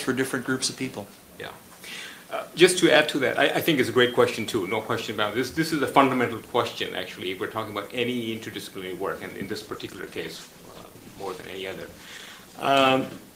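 A call bitrate drop begins at 9.51 s and lasts to the end: the sound turns coarser and duller as the encoder gets far fewer bits, consistent with a fall from about 32 to 15 kbps, holding at its lowest for roughly 3.5 s.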